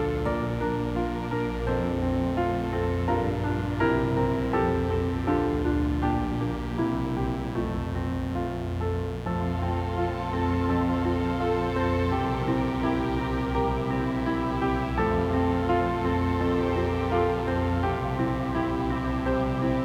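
From start to finish a mains buzz sits under the sound. It is steady and raspy, not a smooth hum. The spacing of its harmonics fits a 60 Hz supply. Sharp switching spikes, from something like a dimmer, a rectifier or a missing shield, leak into the signal twice per mains cycle. That builds harmonics of 60 Hz stretching up to several kHz. The buzz is loud, roughly 10 dB below the sound itself.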